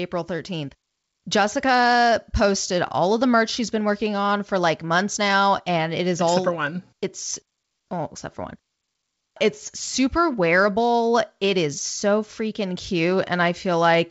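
No technical faults can be heard in this speech, which comes through G.722 wideband telephone coding at 64 kbit/s.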